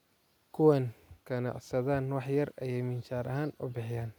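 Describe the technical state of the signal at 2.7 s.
At 2.7 s the speech signal is intact, with no dropout, distortion, glitch or other audible fault at that point.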